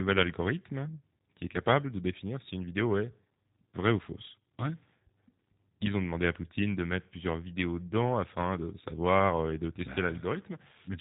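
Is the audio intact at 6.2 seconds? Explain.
No. At 6.2 s, as throughout, the speech carries G.729 codec damage: it is rebuilt from a vocal-tract filter and sparse pulses at a rate consistent with about 8 kbit/s, sounding rough and synthetic, with nothing above 3.8 kHz.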